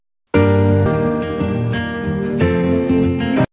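At 0.86 s the receiver threw away a stretch of audio that was still in transit or overflowing the jitter buffer, while later material was already queued. The result is a skip ahead: roughly 0.7 s of sound vanishes and playback resumes with no filler and essentially no gap, so the material on either side of the cut is butted straight together and the flow lurches abruptly forward.

From 2.44 to 3.48 s the jitter buffer was holding more audio than its target, so the receiver trimmed it back by repeatedly cutting out tiny segments one or a few pitch periods long, about 70 ms in all. This jitter buffer speed-up runs the sound at 106% of normal rate while leaving pitch unchanged, so that final second comes across slightly rushed. Throughout, the call path's codec leaves nothing above 4 kHz, which fits G.711 A-law at 64 kbps.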